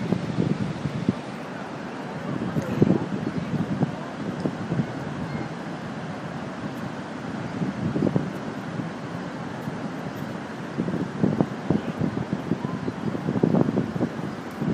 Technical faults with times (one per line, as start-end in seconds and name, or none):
none